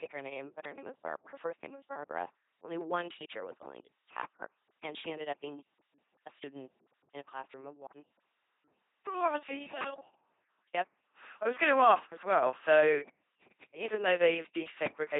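LPC-10 vocoder coding runs through the whole speech clip, and the damage is heavy. The voice is rebuilt from a pulse train or noise shaped by a small all-pole filter, each moment forced wholly voiced or unvoiced. It buzzes mechanically, with stray hiss, typical of 2.4 kbit/s coding.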